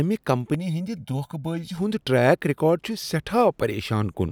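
From about 0.54 s to 1.77 s, just before "ہُند ٹریک", there's channel delay (comb filtering). One side runs roughly a millisecond and a half behind the other, and once they're folded to mono the shared parts of the speech cancel at evenly spaced frequencies, starting somewhere around 400 Hz. You hear it as a hollow, phasey patch where the fixed notches are carving chunks out of the spectrum.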